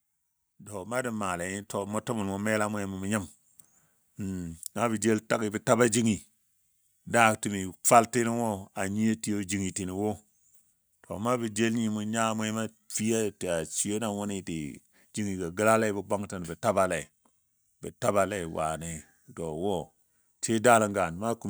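From 0.71 s to 4.59 s the automatic gain rises by about 9 dB. The control judged the input too quiet and climbed gradually, so speech and background noise swell together over nearly four seconds, levelling off just before "naa bə jel tagi".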